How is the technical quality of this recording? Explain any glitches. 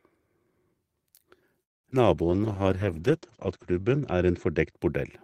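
The recording has four kinds of network-related glitch, all between 1.6 and 5.1 s, and they noticeably degrade it.

Call audio freeze, 1.63 to 1.86 s. The sound stops and about 200 ms of near-silence is inserted before it resumes where it left off, so nothing is lost but the audio is pushed back by roughly 0.21 s. This is most likely a delay in packet delivery that left the receiver's jitter buffer empty. The receiver had nothing new to play, so it stretched the last sound into a fading tail and then waited.

Short concealed packet loss, 1.90 to 1.92 s and again at 1.92 s. Right after the freeze, two small chunks of audio, about 20 ms and 40 ms, never reached the decoder in time. The receiver filled each gap by extending the preceding sound, then blended back into the real signal. These are heard as quick smears, and the timeline tightens by a few hundredths of a second as the buffer catches up.

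Call bitrate drop, 2.18 to 5.05 s. The encoder was forced into a much lower bitrate, and the sound fits a fall from around 32 kbps to 10 kbps, holding at the bottom for about 1.5 s. The audible bandwidth shrinks from 20 kHz to 8 kHz, so the audio becomes muffled and loses its crispness. Coarser coding adds a rough, watery texture until quality recovers near the end.

Jitter buffer slow-down, 2.37 to 2.64 s. Running low on reserve, the receiver repeated tiny slices of the waveform to stretch time. About 50 ms is added over this stretch, so playback runs at roughly 85% speed with the pitch unchanged. Sounds are audibly drawn out.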